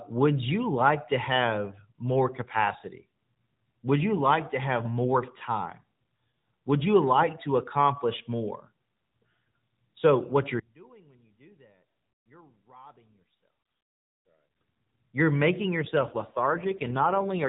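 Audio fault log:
15.82–17.48 s, AMR rate drop: the speech turns rougher and buzzier, with a synthetic edge, yet the bandwidth holds and the sound never breaks off. Nothing above 4 kHz is present before or after, as with the AMR narrowband mobile codec heard throughout. The change fits the codec being switched from its 12.2 kbps mode down to 5.9 kbps, leaving fewer pulses to model each 5 ms subframe, so voicing detail coarsens until the clip ends.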